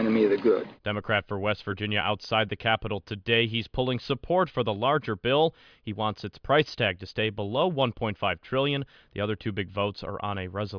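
Nothing stood out as a technical fault on listening to this speech recording.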